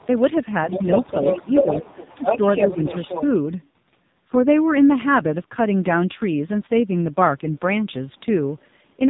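Speech, carried throughout by the AMR narrowband mobile codec at a heavy level of damage. Nothing above about 3.8 kHz survives, so the voice is boxed into the telephone band, and the low-rate excitation gives it a buzzy, synthetic edge. The degree of coarseness suggests one of the lowest AMR-NB modes, around 5.9 kbps, where too few pulses per subframe are available to model the voice. Twice, the speech level sags in a way that points to speech suppressed in double talk, likely from an echo canceller treating simultaneous far-end activity as echo and attenuating the near-end talker along with it. The first dip falls between 1.44 and 1.86 s, pulling the voice down by roughly 10 dB for a total of about 150 ms. The second, between 2.16 and 2.41 s, is deeper at around 15 dB and lasts roughly 100 ms in total.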